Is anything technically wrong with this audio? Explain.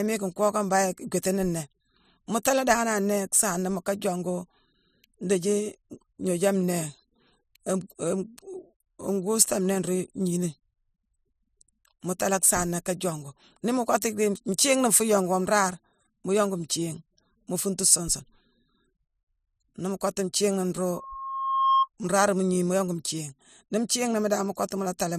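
Yes. From 20.91 to 21.88 s a 1.1 kHz tone swells over most of a second to a few decibels above the speech: loudspeaker feedback squeal, as the microphone re-amplifies its own loudspeaker.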